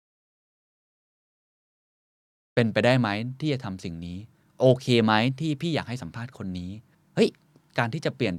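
The clip opens in dead silence, with no room tone at all, and the speech only comes in at 2.57 s, already in mid-flow rather than starting cleanly. That is an audio dropout to silence lasting from the very start until 2.57 s. The likely cause is that the input signal was lost, through a disconnected device, a failed link or an accidental mute, while recording carried on writing silence, so whatever was said before that point is gone.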